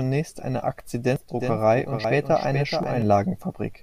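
At 1.16 s a jump in the speech marks a dropped buffer (overrun), likely from the program reading samples too late, so roughly 70 ms vanishes and the waveform shows a hard splice with no gap. From 1.40 s to 3.02 s a doubled audio track appears: a full-band copy, likely from a second, slower capture path, trails by about 400 ms at about 5 dB lower, with no reverb tail. It starts and stops abruptly, and the spectrogram shows every speech pattern repeated, shifted right. Further dropped buffers cut roughly 70 ms at 2.04 s and a shorter 20 ms or so at 2.83 s, each a sharp vertical discontinuity.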